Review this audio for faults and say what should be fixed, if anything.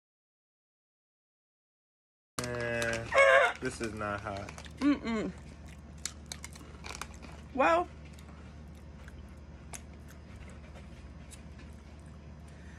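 An audio dropout to silence runs from the very start of the clip to 2.38 s. The recording opens already inside it, with no room tone at all, and the sound then comes in abruptly mid-flow. The likely cause is a lost input, such as a disconnected device, a failed link or a stray mute, while the recorder kept writing silence. On a waveform this shows as a flat line; on a spectrogram it is a blank block that ends in a hard vertical edge. Whatever happened before 2.38 s is unrecoverable. To prevent it, secure cables and links, check mute states, and monitor input levels before and during recording.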